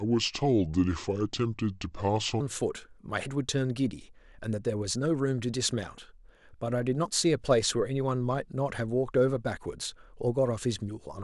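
From the start to 2.40 s, the samples are played back at a lower rate than they were captured at, with no conversion, a wrong sample rate that fits 44.1 kHz audio running at 32 kHz. The speech slows to 0.726 times normal speed and drops about 5.5 semitones, sounding deep and dragging.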